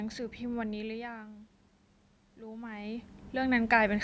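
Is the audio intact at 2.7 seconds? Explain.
No. At 2.7 seconds the clip is inside an automatic gain rising event running from 2.36 to 3.99 s. The gain control sensed the input had fallen by about 14 dB, as the talker moved back from the microphone around 2.5 s, and it began slowly pushing its gain up by about 7 dB. At 2.7 s you hear the voice and the room noise swelling together, a gradual lift rather than a sudden jump.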